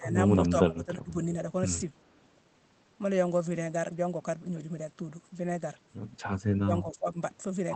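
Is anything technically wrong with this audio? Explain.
Yes. The speech dips sharply at 0.0–0.17 s, 0.69–1.35 s and 6.63–7.19 s, falling roughly 15 to 20 dB. The likely cause is speech suppressed in double talk. Overlapping talk was mistaken for echo and turned down.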